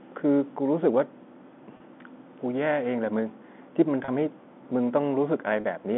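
Telephone-band speech, coded as G.711 and cut off above about 3.5 kHz, has three brief dropouts from packet loss with pitch repetition at 1.77–1.80, 4.05–4.08 and 5.61–5.64 s. Each gap is about 30 ms, which fits a single lost packet. The receiver fills it by looping the last pitch period, so each gap sounds like a short, buzzy hold. On a waveform, identical repeated cycles appear. On a spectrogram, the harmonics run flat and unchanging for that instant.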